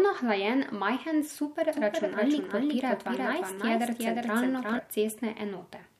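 From 1.73 s, just after "hlajen majhen", a second copy of the speech trails the first by about 400 ms, some 5 dB quieter, until 4.79 s, where it cuts off abruptly. The copy is full-band and dry, with no decay or room colour, so it sounds like a doubled audio track rather than an echo. The likely cause is the same signal being captured again through a slower path and mixed in out of step.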